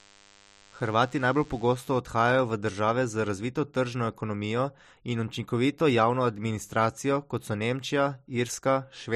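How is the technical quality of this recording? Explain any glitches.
The recording has one technical fault, confined to the opening two seconds of the speech.

From 0.0 to 2.0 s there is a steady buzz at 100 Hz, rich in harmonics, sitting well below the speech level. This is DECT cordless phone buzz. A DECT handset or base station nearby transmits a short radio burst every 10 ms, and the audio circuitry picks up and rectifies those bursts. That turns the 100 Hz burst rate into an audible tone with a stack of overtones.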